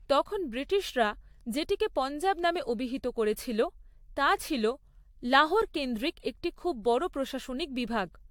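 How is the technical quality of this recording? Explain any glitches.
The recording has a persistent swirly, hollow quality across the whole speech clip, with smeared consonant attacks. Nothing is heard above about 19.2 kHz. This is generation loss, likely from the audio being decoded and re-encoded around five times with AAC-LC at a setting that fits 96 kbit/s. Each pass quantises again on a shifted frame grid, so the coding noise and spectral gaps stack up. The result sounds more degraded than a single encode at that rate would.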